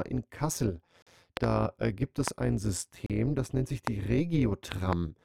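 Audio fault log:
throughout: overlap-add ripple. Windowed frames were rejoined with an overlap whose gains do not sum to a constant, so the level dips and swells about 11 dB once per frame, near 150 Hz. This gives a rough, buzzy, robotic tremolo over the speech.
1.02–1.07 s and 3.06–3.10 s: gap between stream segments. Timestamps of consecutive 2-second segments left holes, which the player filled with silence of 42.5 ms and 34.7 ms. The speech stops dead with hard edges, two seconds apart, and nothing is lost.
1.37–1.46 s, 2.28–2.30 s, 3.87–3.89 s, 4.72–4.95 s: loud pop. A sudden voltage step, likely from a plug, switch, static or driver glitch, was added to the signal. Sharp pops stand roughly 15 to 20 dB above the speech, doubled at 1.37 s and 4.72 s, while the speech continues underneath.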